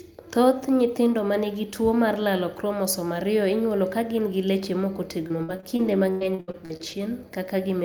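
Speech clip with repeated packet loss (robotic sound) from 5.27 to 6.99 s: short dropouts, up to 100 ms, get patched by stretching the previous sound, so it turns choppy with pieces missing.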